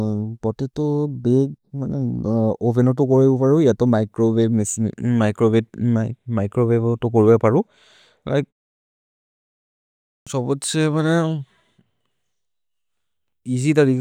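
At 10.19 s, after a 1.75 s pause, there is a clipped start after a pause. About 76 ms of speech is swallowed while the output wakes, so the word begins abruptly.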